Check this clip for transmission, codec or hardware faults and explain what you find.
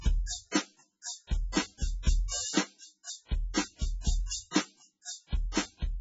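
Two codec faults are audible in this music clip, one present throughout and one tied to two attacks.

Throughout, nothing sounds above 7.6 kHz, and the sound is heavily watery and swirly. This is likely MP3 compression at a very low bitrate, around 16 kbps: starved of bits, the encoder cuts the treble and zeroes weak frequency lines that flicker between frames.

Pre-echo occurs from 1.52 to 1.57 s (47 ms) and from 4.51 to 4.55 s (39 ms). The codec spreads quantisation noise across each transform block, so noise meant for a late, loud attack leaks into the quiet just before it, heard as a brief hiss ahead of a softened onset.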